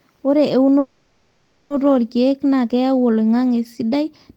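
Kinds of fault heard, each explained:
Call audio freeze: From 0.79 to 1.72 s the speech stops moving and the last sound is stretched into a fading buzz or hiss that never drops fully to silence, filling about 910 ms. It is likely a delivery stall that emptied the jitter buffer. When the speech resumes it picks up exactly where it broke off, arriving about 910 ms later than before. Unlike a dropout, which skips over part of the speech, this one loses nothing.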